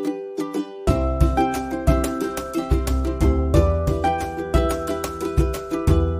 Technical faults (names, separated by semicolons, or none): none